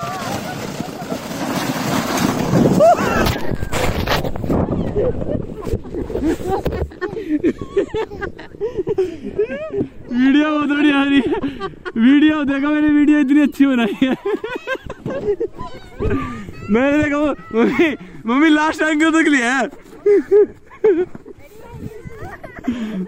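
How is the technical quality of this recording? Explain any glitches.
No audible technical faults.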